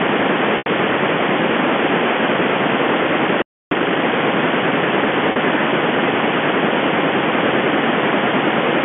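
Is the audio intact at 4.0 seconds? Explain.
No. Right up to 4.0 seconds the audio is in a time-compressed catch-up, running from 3.71 to 3.99 s. After a stall, the player clears its backlog by cutting out small pieces and cross-fading the joins. Here it plays at about double speed. The sound is hurried but keeps its normal pitch. It is heard through the narrow telephone band of G.711 A-law coding.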